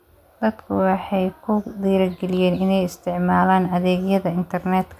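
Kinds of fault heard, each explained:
No faults detected in the speech recording.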